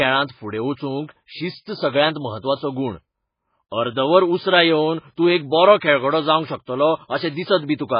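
Throughout, the speech has nothing above 5 kHz and sounds watery and swirly, with metallic chirps on s sounds, likely heavy MP3 compression near 16 kbps rather than simple low-pass filtering.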